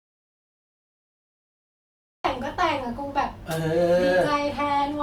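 From the very start until 2.25 s the speech is missing in an audio dropout to silence: plain silence with no room tone or hiss, and the speech cutting in abruptly mid-flow. A lost input, likely a disconnected or muted source, explains this; a natural pause would keep background noise.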